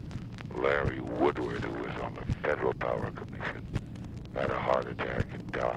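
Adaptive stream at a lower bitrate, from 2.10 s to the end: the stream switched to a leaner encoding, most likely because the connection slowed, and the quality change is abrupt with no gap in playback. Before the switch the sound has the fullness of roughly 64 kbit/s Opus. Afterwards codec artefacts grow, which fits a drop to around 24 kbit/s.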